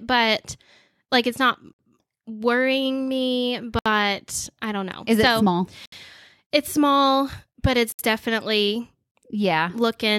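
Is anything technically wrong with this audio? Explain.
Yes. There is a gap at a join of encoded pieces at 1.73, 3.79, 5.86 and 7.92 s, recurring every 2.0 s. The speech was encoded in separate chunks and butted together untrimmed. Each chunk's encoder start-up delay and padded final frame survive as a silence.

The first gap lasts about 58 ms and the later ones about 67 ms. They fall after "it's not worrying me", "so it small" and "small but". Each has smeared edges before the speech resumes where it stopped.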